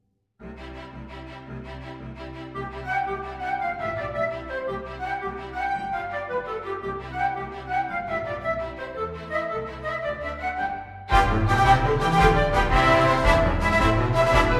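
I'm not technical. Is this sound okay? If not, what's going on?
Yes, it sounds fine; nothing is wrong with it.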